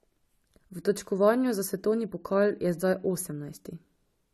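Throughout the speech, nothing is present above 13.9 kHz, and two different kinds of compression artefact are heard together. This fits transcoding between lossy codecs, likely an MP3 encode near 96 kbit/s re-encoded as AAC-LC near 48 kbit/s, the second spending bits on the first's artefacts.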